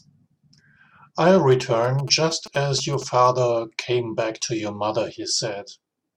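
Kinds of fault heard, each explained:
GSM signalling bursts: a nearby 2G phone's short radio bursts, rectified by the audio circuit, give a galloping dit-dit-dit of short 217 Hz buzzes, well below the speech, unlike steady mains hum.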